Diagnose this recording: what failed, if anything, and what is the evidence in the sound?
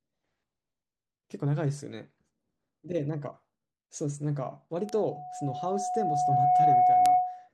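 Loudspeaker feedback squeal, from 4.76 s to 7.49 s. The failure is in the acoustic path, before any digital stage: a microphone is picking up the loudspeaker it feeds. At 732 Hz the loop gain rises above one, so that frequency regenerates on each pass. A pure tone swells over roughly two seconds and settles at around ten decibels above the speech. It persists until just before the clip ends.

Bit error spikes, at 4.89 s and 7.06 s. These come from a digital link or storage, where a flipped bit throws a sample value off by a power of two before it snaps back. Each one is a single sharp broadband tick, only a couple of samples wide and unrelated to the speech or the tone. The first peaks at about −19 dBFS and the second, much louder, at about −7 dBFS.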